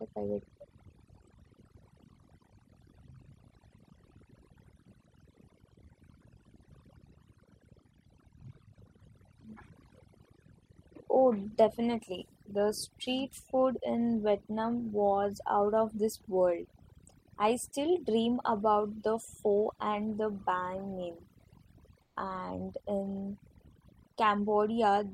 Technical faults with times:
0.00-25.14 overdone noise removal
22.02-22.16 comfort noise in place of the background

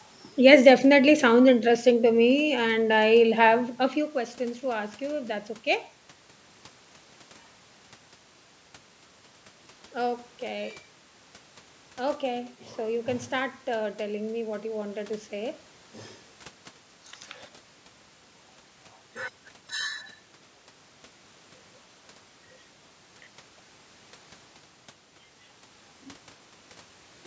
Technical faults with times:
none

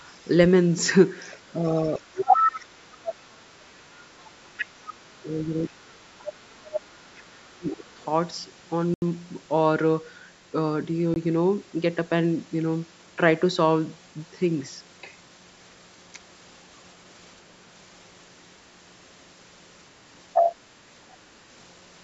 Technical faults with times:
1.20-3.12 other side's voice leaking through
1.52-3.81 speech suppressed in double talk
3.95-4.93 other side's voice leaking through
4.35-6.32 speech suppressed in double talk
5.46-6.83 other side's voice leaking through
6.92-7.99 speech suppressed in double talk
7.69-8.04 other side's voice leaking through
8.94-9.02 block of digital silence
11.14 block of digital silence
20.34-20.55 other side's voice leaking through

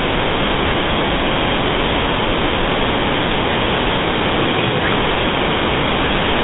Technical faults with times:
0.00-6.43 GSM full-rate codec
5.28-5.36 GSM bit errors

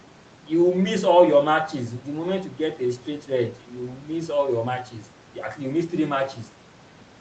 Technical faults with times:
none

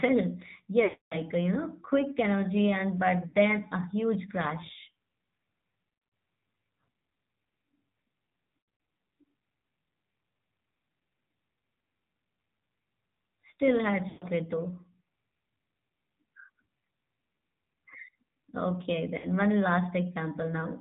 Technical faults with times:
0.00-20.80 AMR narrowband mobile codec
0.84-1.18 lost AMR speech frames
3.28-3.36 lost AMR speech frames
5.84-6.12 lost AMR speech frames
8.60-8.88 lost AMR speech frames
14.08-14.25 lost AMR speech frames
19.18-19.29 lost AMR speech frames

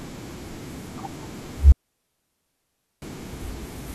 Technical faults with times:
1.72-3.02 digital wireless dropout

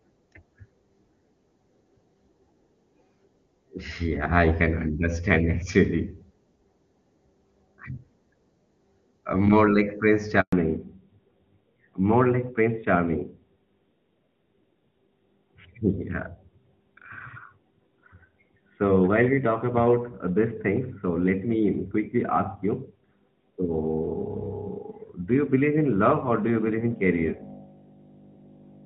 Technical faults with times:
10.40-10.52 handover gap
10.52-28.85 fallback to narrowband

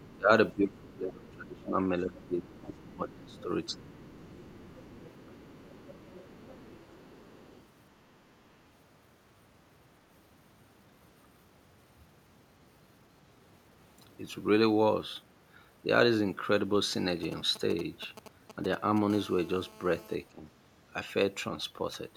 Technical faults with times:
0.00-0.06 other side's voice leaking through
0.13-3.98 speech suppressed in double talk
1.28-1.64 other side's voice leaking through
2.19-2.78 other side's voice leaking through
3.30-7.63 other side's voice leaking through
5.26-5.32 speech suppressed in double talk
17.10-18.99 GSM signalling bursts
20.32-20.42 speech suppressed in double talk

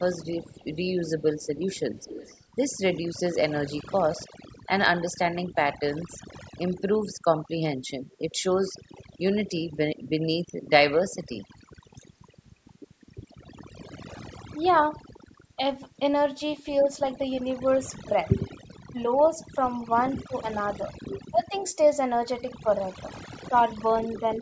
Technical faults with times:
0.00-24.41 overdone noise removal
0.46-3.19 echo leak
8.11-9.04 echo leak
14.52-15.58 speech suppressed in double talk
17.91-18.98 speech suppressed in double talk
19.23-19.28 echo leak
20.28-21.53 speech suppressed in double talk
22.63-24.23 speech suppressed in double talk

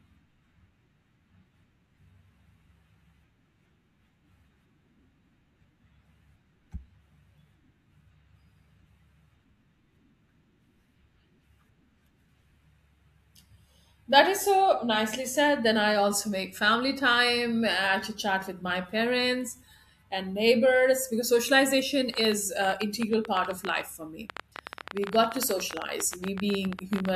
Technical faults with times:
22.14-27.10 train of clicks

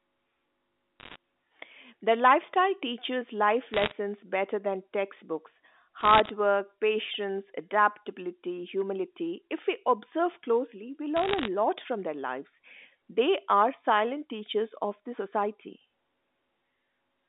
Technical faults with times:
1.00-1.16 bit errors on a digital phone line
3.74-3.92 bit errors on a digital phone line
6.01-6.29 bit errors on a digital phone line
11.17-11.48 bit errors on a digital phone line

